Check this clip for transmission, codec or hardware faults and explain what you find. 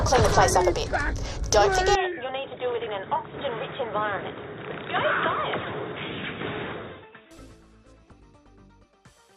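One hardware fault is present: an input switched to a poorer device, running from 1.95 s to 7.31 s. Within that span nothing reaches above 3.8 kHz, so the sound turns dull and boxy. It also drops about 10 dB in level and gains a new, fairly low background noise. The change is abrupt in both directions, with no gap at either switch. The likely cause is the system moving to a narrower-band microphone or a headset's call profile and then back again.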